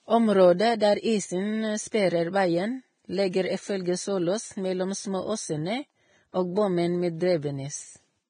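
Across the whole speech clip the treble sounds hissy and grainy, with roughened tones and smeared consonant onsets, likely from heavy Vorbis compression at a rate fitting roughly 20 kbps. A spectrogram would show a lowered high-frequency cut-off and speckled, noisy upper bands.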